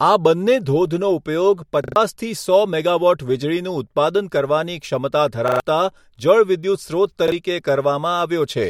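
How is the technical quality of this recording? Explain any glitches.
The speech is marred by three stutters, all repeated buffer faults. At 1.84 to 1.96 s and again at 5.48 to 5.6 s, fresh audio failed to reach the playback device in time, so it replayed its last block three extra times, which fits a buffer of about 40 ms. Each one is a hard-edged triple stutter that swallows roughly a tenth of a second of speech. At 7.28 to 7.32 s a single repeat leaves a briefer hitch.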